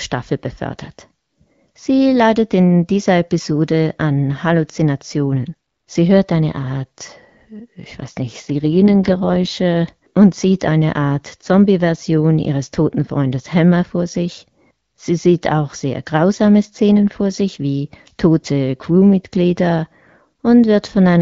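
From 8.45 to 9.58 s, between "ich weiß nicht" and "und sieht eine", an AMR rate drop cuts the wideband codec's bitrate, which fits a fall from 12.65 to 6.6 kbit/s. The speech turns rough and synthetic without any gap or loss of bandwidth.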